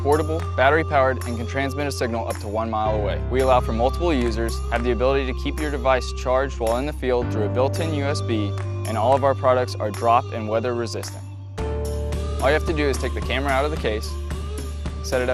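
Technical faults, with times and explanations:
Throughout, MP2 compression: likely MPEG Layer II coding starved of bits, fitting 80 kbps; upper sub-bands flicker off and coarse quantisation sounds dull and gurgling.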